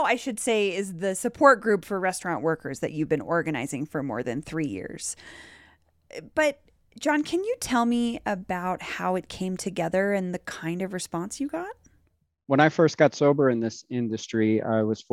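Speech recording with no audible technical faults anywhere in the clip.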